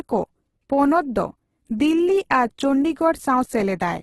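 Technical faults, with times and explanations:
Throughout: Opus compression, likely the cause of the grainy, rough texture on the speech, with heavy damage and nothing above 12.2 kHz. A spectrogram shows a hard ceiling at that frequency and bands filled with smeared noise rather than clean harmonics, pointing to the music (CELT) mode at a very low bitrate, perhaps near 12 kbps. Starved of bits, the encoder keeps each band's energy but fills in detail with folded or noise-like content.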